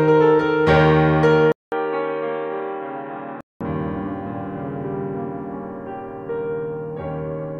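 A music clip in which, from 1.52 s to 3.61 s, the sound turns dull and boxy, with nothing above 4 kHz, a faint new hiss underneath and a somewhat lower level, before it opens up again. A 200 ms gap marks the switch. On a spectrogram the upper bands are cut flat for that stretch; the waveform shows the brief silence and a slightly shrunken envelope. The likely cause is the input switched to a poorer device.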